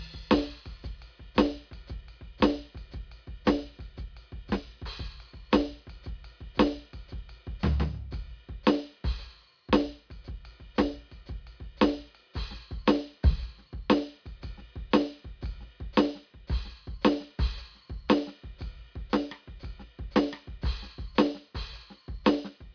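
No technical faults can be heard in this music.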